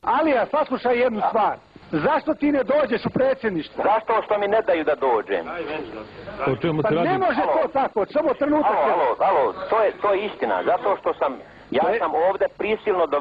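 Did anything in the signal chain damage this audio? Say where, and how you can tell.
No, there is no audible damage from any stage of the signal chain anywhere in this audio.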